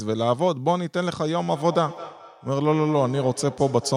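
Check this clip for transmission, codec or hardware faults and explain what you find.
One fault is present, a feedback echo between two devices. From 1.53 s to the end, the speech returns roughly every fifth of a second, about 16 dB below the original. A second device's microphone re-captures this device's playback, which its echo canceller cannot remove.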